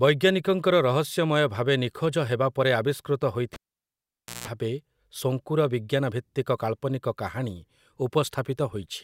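At 3.54 s the speech drops out with a sharp pop: a live cable was pulled and plugged in again. For about 0.89 s the signal falls to near silence while the connection is open. As the plug goes back in, only the tip makes contact first, so about 0.17 s of 60 Hz mains buzz comes through before full contact. A second pop at 4.48 s marks the sound returning.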